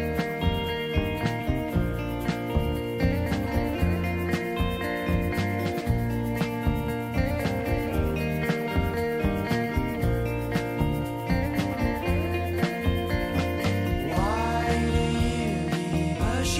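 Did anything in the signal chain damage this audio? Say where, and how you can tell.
No, nothing in the signal chain audibly damaged this audio. No stage, from the wiring and converter through to storage and playback, leaves a mark that can be heard.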